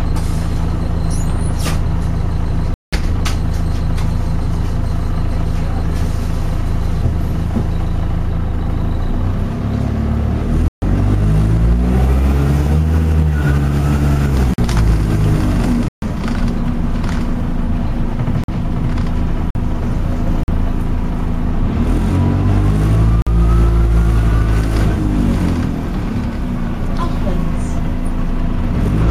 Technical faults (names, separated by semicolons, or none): block of digital silence